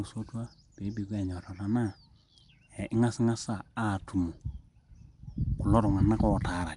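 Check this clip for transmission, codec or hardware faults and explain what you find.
One fault runs the full length of the speech: Nellymoser compression, the likely cause being Flash's Nellymoser Asao microphone codec. It codes short blocks on a fixed, meagre bit budget, and the texture points to roughly 44 kbps. Weaker bands get no bits and are refilled with noise, and nothing survives above 10.7 kHz. The result is plainly audible: a rough, hissy halo around the speech and a smeared, underwater quality throughout.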